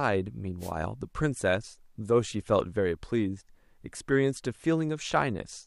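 At 0.59 s a wireless microphone noise hit breaks into the speech and lasts until about 0.72 s, roughly an eighth of a second. The FM radio link from the transmitter briefly lost strength as reflected signals cancelled one another, so the receiver's hiss surged up and partly buried the voice. It sounds like a quick swish of static.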